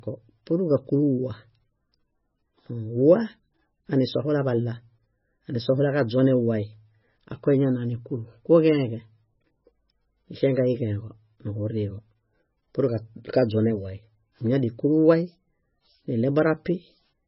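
The speech sounds watery and swirly throughout, with nothing above 5.6 kHz. Likely heavy MP3 compression, its tiny bitrate dropping treble and weak frequency lines.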